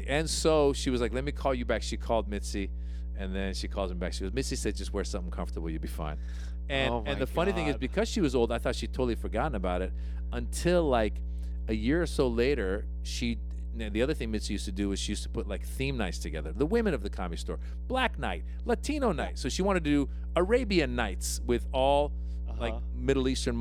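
Mains hum runs through the whole of this speech recording, a steady low tone at 60 Hz sitting only about 5 dB below the level of the speech itself. It comes from the power line leaking into the signal path, through a ground loop or by coupling from a nearby transformer. Because the tone never stops or changes, it stays under every pause and every phrase from start to finish.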